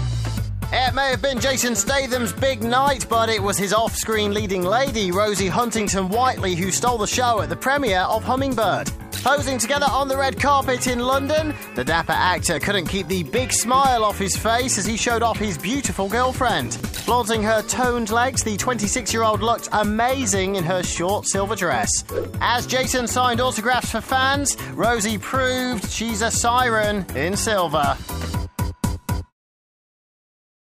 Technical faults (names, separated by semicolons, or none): dropped buffer (overrun)